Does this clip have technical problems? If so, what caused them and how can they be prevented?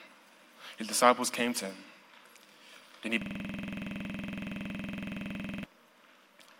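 Yes. From 3.22 s to 5.64 s the audio locks into a rapid, mechanical stutter, a single 46.44 ms fragment repeating about fifty times at 21.5 Hz, so it sits between a coarse buzz and a machine-gun rattle. This is a system hang loop: the computer or its audio driver stalled, and the sound hardware kept replaying the last filled section of its ring buffer. The loop length fits a 2048-sample buffer. To prevent it, fix the cause of the stall by updating or replacing the driver, and have the system mute output whenever the buffer is not being refilled.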